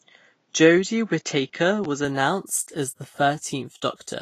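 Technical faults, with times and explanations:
throughout: Vorbis compression. The speech carries plainly audible codec damage: a grainy, hissy treble with roughened tones and softened consonant attacks, and nothing above 14.1 kHz. Coarse quantisation of the residue turns fine high-frequency detail into noise, which fits a low-bitrate setting around 31 kbps, likely.
0.00–2.05 s: input switched to a poorer device. The opening stretch is duller, with nothing above 7.6 kHz and faint added background noise about 50 dB below the signal, and no level jump or gap at the switch. A narrower-band device, likely another microphone or a headset call profile, explains it.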